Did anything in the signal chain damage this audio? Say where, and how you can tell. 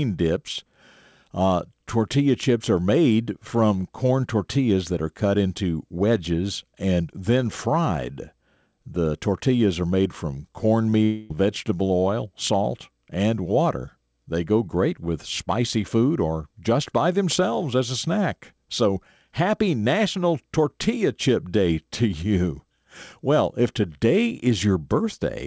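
Yes, both problems are at the network stage, in the gap between "tortillas are made from" and "vegetable oil salt and". The first is a short concealed packet loss at 10.90 to 10.94 s: about 20 ms of audio arrived too late for the decoder, so the receiver extended the preceding sound to fill the hole and crossfaded back. You hear it as a brief smear or wobble rather than a clean cut.

Right after, from 11.04 to 11.32 s, there's what sounds like a long network dropout. It's most likely a run of lost packets covering roughly a quarter of a second, about 260 ms. It never falls to true silence. The concealment keeps extending the last sound as a fading buzzy, hissy tail, and the speech then resumes at "vegetable oil salt and" with that stretch missing. The G.722 call path caps everything at 8 kHz.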